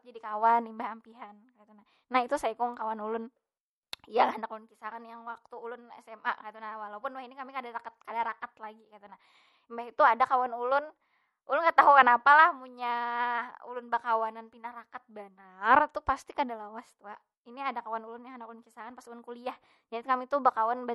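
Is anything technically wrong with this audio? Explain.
Yes. Throughout the speech, a watery, swirly quality, with metallic chirps on s sounds and smeared attacks, points to likely MP3 compression at a low bitrate, roughly 48 kbps. Short of bits, the encoder cuts the treble and zeroes weak frequency lines that flicker between frames. On a spectrogram this appears as a flat ceiling with speckled gaps beneath it.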